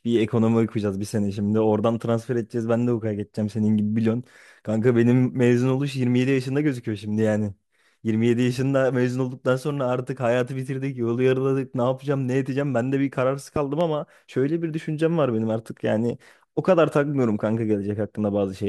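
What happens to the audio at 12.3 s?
Nothing goes wrong at 12.3 s: the speech carries on intact through that moment, with no dropout, glitch or other fault to be heard.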